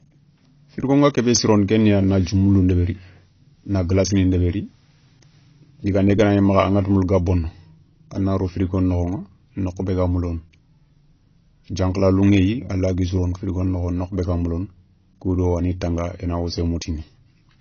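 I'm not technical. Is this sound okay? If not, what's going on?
No. This is low-bitrate audio saved at a high bitrate: a heavily squeezed copy was likely resaved as a large file. Throughout, the speech sounds dull, with nothing above 6.6 kHz.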